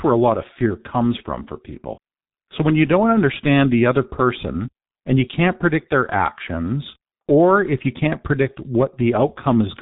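From start to finish the speech carries heavy G.723.1 codec damage, consistent with a rate near 6.3 kbit/s. The coder rebuilds the voice from a coarse model updated only every 30 ms and discards everything above 4 kHz, so the speech sounds muffled and hoarse, with smeared consonants.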